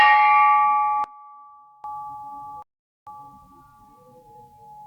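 From 1.04 to 1.84 s the sound drops about 22 dB, likely one channel inverted cancelling in mono; the spectrogram shows energy collapsing across the band. At 2.62 s a 0.44 s silence from a likely Bluetooth stall leaves a flat waveform gap until playback resumes at 3.07 s.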